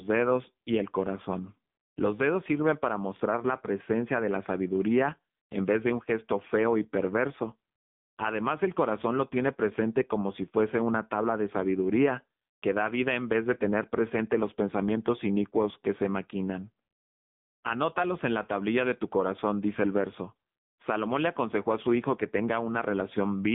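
Throughout, the AMR narrowband mobile codec runs at a rate fitting 6.7 kbps: nothing above 3.7 kHz, and buzzy, synthetic speech.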